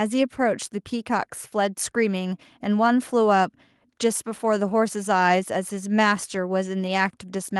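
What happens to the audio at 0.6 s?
Nothing goes wrong at 0.6 s; the speech there plays through intact, with no dropout, click, distortion or other fault at that moment.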